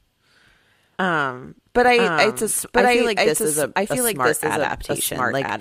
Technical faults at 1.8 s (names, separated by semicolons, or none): doubled audio track; DAB burbling